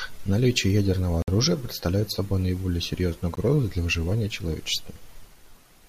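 A speech clip with two short dropouts, a Bluetooth stall, likely caused by interference draining the headphones' buffer: the audio goes silent for 56 ms from 1.22 to 1.28 s, just before "оружия представляет собой наиболее", then again for 18 ms at 3.35 s, between "представляет собой наиболее серьезную" and "для выживания".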